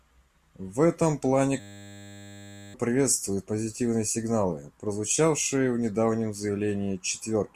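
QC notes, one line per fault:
1.6–2.74 s, system hang loop: the playback side froze and the hardware kept replaying the same 10 ms chunk over a hundred times, so the speech turns into a flat 100 Hz buzz, with about a second of real audio lost.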